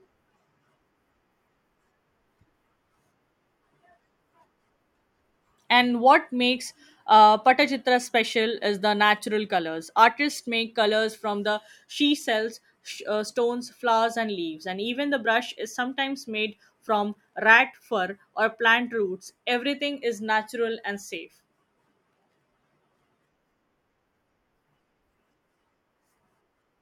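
There are no technical faults to describe in this speech recording.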